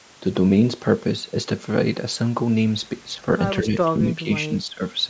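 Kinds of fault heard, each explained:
Speech suppressed in double talk: four dips cut into the speech in the last two seconds, starting at 3.17, 3.62, 3.99 and 4.48 s. Each lasts a fraction of a second, and they deepen from a slight sag to a clear drop of roughly 15 dB. The likely cause is an echo canceller that mistook the talker for loudspeaker echo while both ends spoke and turned it down. A waveform shows the envelope pinching inward at those points, and a spectrogram shows the harmonics fading there.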